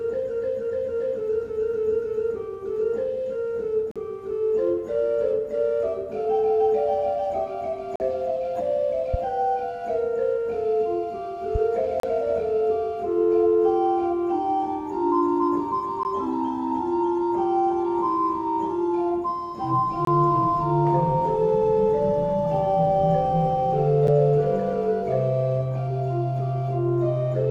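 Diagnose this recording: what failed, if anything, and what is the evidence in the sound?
Playback-side segment joining failed: gaps between stream segments fall every 4 s, at 3.91–3.96, 7.96–8.00, 12.00–12.03, 16.03, 20.05–20.07 and 24.07 s. Timestamps between consecutive segments leave holes of about 9 to 43 ms, which the player fills with hard-edged silence.

Two loud pops sit on top of the continuing sound at 9.14–9.17 and 11.55–11.58 s, each a single sharp pulse peaking roughly 10 dB above the signal. The likely cause is a voltage step in the analogue wiring or a driver glitch.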